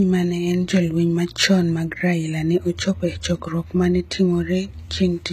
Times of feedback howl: none

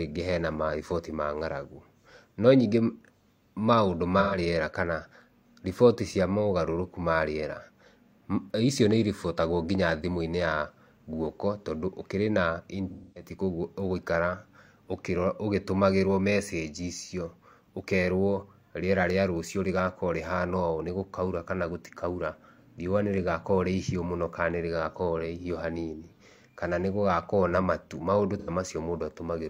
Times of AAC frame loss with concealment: 4.19-4.38, 12.90-13.30, 28.39-28.49

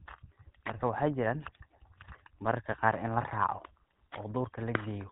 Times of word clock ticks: none

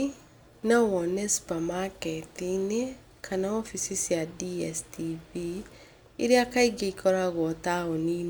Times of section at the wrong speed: none

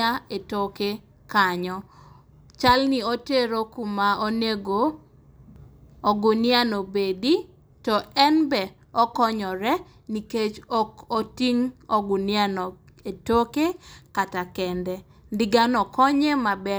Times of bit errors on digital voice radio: none

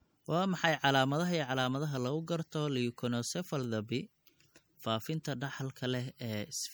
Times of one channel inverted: none

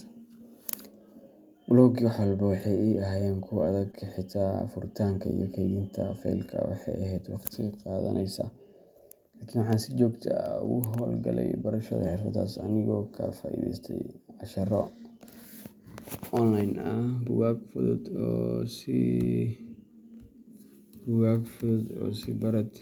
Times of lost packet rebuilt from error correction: 10.65-10.67, 12.59

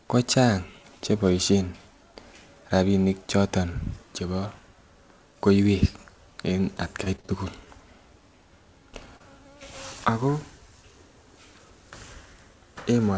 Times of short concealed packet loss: 9.17-9.22

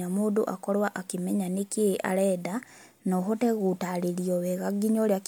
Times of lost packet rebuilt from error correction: none

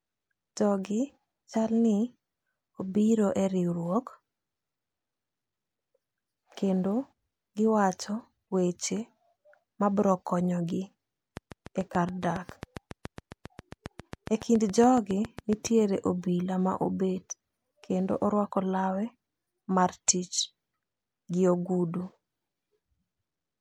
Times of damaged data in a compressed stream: 8.45-8.48

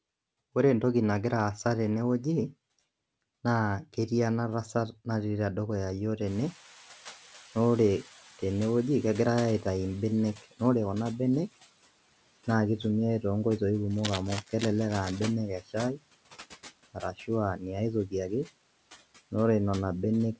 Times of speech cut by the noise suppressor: 15.59-15.75, 16.94-17.30

